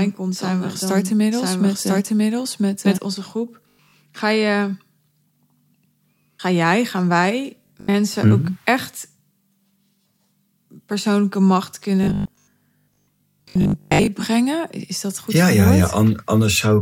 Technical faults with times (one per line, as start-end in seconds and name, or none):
0.00-2.98 doubled audio track
3.63-3.93 robotic sound from repeated short buffers
7.63-7.95 robotic sound from repeated short buffers
12.03-14.09 robotic sound from repeated short buffers